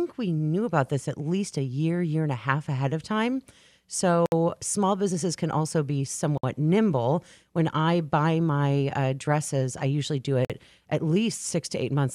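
Gaps at joins of encoded pieces open at 4.26 s (62 ms, just before "small businesses can also"), 6.38 s (57 ms, after "businesses can also be") and 10.45 s (49 ms, after "dresses I usually do"). Separately encoded segments were joined untrimmed, so each encoder's start-up delay and padded final frame remain as abrupt silences with smeared edges before the speech resumes where it stopped.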